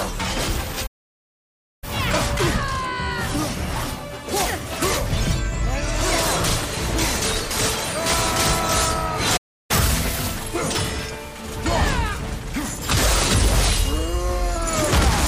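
At 0.86 s the sound stops dead for 0.96 s, a playback stall, most likely from the player running out of buffered data. The sound picks up again at 1.84 s. Catch-up at higher speed follows from 1.84 to 4.84 s. The backlog plays at 1.1 times speed, so pitch rises by roughly a semitone and a half along with tempo before settling. A second stall at 9.37 s silences the audio for 0.33 s, again likely a buffer underrun. A harder catch-up runs from 9.71 to 10.36 s at 1.5 times speed, lifting pitch by around seven semitones. Because speed and pitch rise together and then return to normal, this is resampling, not a steady pitch shift or a wrong sample rate.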